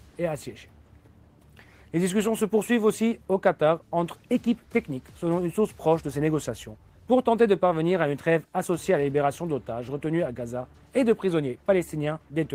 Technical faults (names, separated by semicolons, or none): none